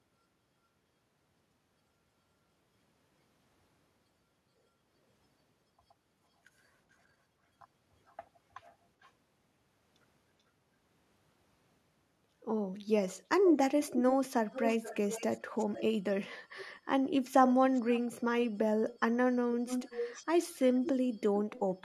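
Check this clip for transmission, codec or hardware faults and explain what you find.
One fault type is present: an echo leak recurring in seven stretches of the speech, at 8.07–9.11, 13.11–13.25, 13.84–15.83, 16.58–16.77, 17.73–18.99, 19.66–20.92 and 21.53–21.6 s. A delayed copy of the talker trails the original by 432 ms at first, creeping to 459 ms by the end. Early on it is faint, about 30 dB down. Later it reaches about 20 dB down, and at 13.84–15.83 and 19.66–20.92 s only about 5 dB below the speech, loud enough to sound like a second, overlapping voice. This is likely a far-end loudspeaker bleeding into a microphone whose echo canceller failed to subtract it. On a spectrogram, the harmonic stripes repeat as a fainter copy shifted right by roughly 0.45 s. The waveform shows trailing smaller bursts after syllable groups within these stretches.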